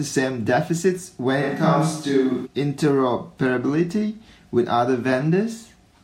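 A short stretch of speech, and for about a second, from 1.44 to 2.45 s, it jumps to sounding like a switch to a distant microphone. The sound suddenly goes roomy and hollow and loses its low end, then snaps back just as abruptly. The level holds roughly steady across the change, and the room noise sits well under the speech, around 35 dB down. The likely cause is the close mic's signal dropping out, with a farther-off mic such as a camera's filling that gap.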